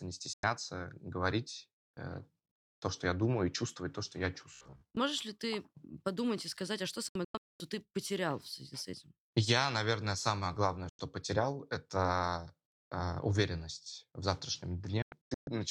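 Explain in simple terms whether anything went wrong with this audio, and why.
Four digital broadcast dropouts cut the speech to silence: about 0.1 s at 0.33 s, again at 10.89 s just after "наверное самое главное", and broken into several short gaps from 7.08 to 7.60 s (after "и сказать а что") and from 15.02 to 15.48 s. The receiver lost or rejected the signal and muted until it recovered. Whatever was said in those gaps is gone.

From 4.53 to 4.97 s, between "чувствовать то что я" and "ли ты подумать и", the speech turns into a stiff, metallic buzz at about 67 Hz. This is robotic sound from repeated short buffers, likely because fresh audio arrived late and a snippet of roughly 15 ms was replayed over and over in its place.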